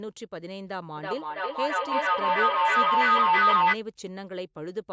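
From 0.97 to 3.81 s, feedback howl builds. A mic-to-speaker loop gains level each pass. It rings near 1.5 kHz, with repeats roughly every third of a second, peaking about 12 dB above speech.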